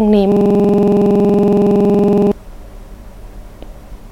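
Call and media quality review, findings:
System hang loop, 0.32 to 2.32 s: speech freezes into a rapid stutter, one 46 ms slice repeating about 21.5 times a second. The driver or host likely stalled while the hardware kept replaying its ring buffer, which fits a 2048-sample buffer.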